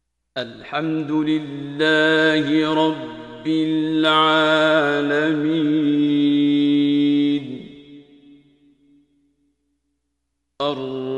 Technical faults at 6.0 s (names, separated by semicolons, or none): none